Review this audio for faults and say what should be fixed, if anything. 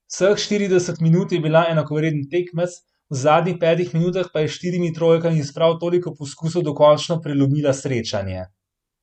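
Nothing stands out here that needs fixing, so the recording can be left as it is.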